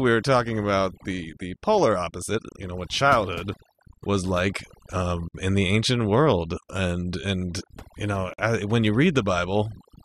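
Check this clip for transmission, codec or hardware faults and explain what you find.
Two faults stand out in this speech: heavy-handed processing across the whole clip, plus two short dropouts from badly joined segments.

Overdone noise removal runs throughout. The noise reducer was set so aggressively that it kills individual frequency bands whenever they sit near its noise estimate, taking softer parts of the voice with them. You get a background that drops away and breaks into little twinkling artefacts.

There's a gap at a join of encoded pieces at 5.28 to 5.34 s, about 62 ms, right before "in the ancient world", and another at 8.34 to 8.38 s, about 49 ms, between "and you" and "when you". Each piece was encoded on its own and spliced untrimmed, so the encoder's start-up delay and last-frame padding leave silence with smeared edges. Then the speech picks up where it left off.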